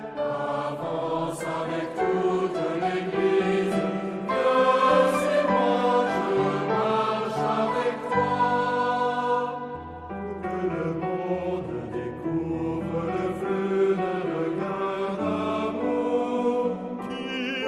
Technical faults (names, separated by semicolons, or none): none